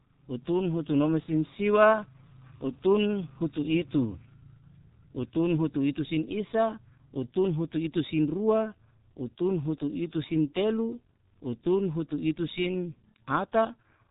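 G.723.1 codec damage runs throughout this speech clip: nothing above 3.8 kHz survives, and heavy, slow-updating coarse coding, consistent with about 6.3 kbit/s, leaves it muffled, hoarse and blurred.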